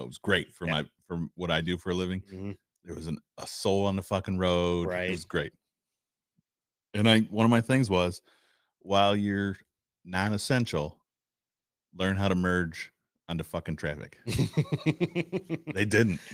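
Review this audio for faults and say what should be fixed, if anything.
Nothing here needs fixing; the speech comes through its light Opus voice compression at 20 kbps, fullband, with no faults to chase.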